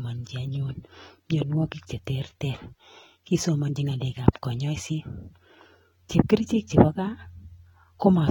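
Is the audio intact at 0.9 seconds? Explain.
No. At 0.9 seconds the speech carries damage that runs through the whole clip, most likely from AAC compression. The coder quantises each frame's spectrum coarsely, which fits a low rate near 24 kbps. Nothing remains above 19.4 kHz. The speech sounds dull and smeared, with a warbly, fizzy edge.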